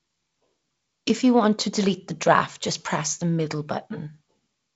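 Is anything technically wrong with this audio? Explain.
No, the speech comes through intact, with the wideband telephone character of G.722 coding: the band stops near 7.7 kHz and the light coding texture fits the 48 kbit/s mode.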